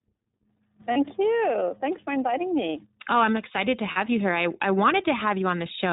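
The whole clip runs through the iLBC codec, and its damage is plainly audible. Nothing above 4 kHz survives. The speech sounds rough and synthetic. Each frame is coded on its own. The sound fits iLBC's 15.2 kbps mode with 20 ms frames.

Lost iLBC frames first appear at 0.92 to 0.98 s, a 40 ms gap. The decoder fills it by repeating the last pitch cycle mixed with noise, heard as a held, buzzy or breathy vowel. The gap fits two lost 20 ms frames. Clarity returns almost immediately.

Lost iLBC frames come again at 3.92 to 3.98 s, also 40 ms long. The same concealment replays the final pitch period blended with noise. The result is again a brief, sustained buzzy or breathy vowel. Because frames stand alone, the speech recovers right away.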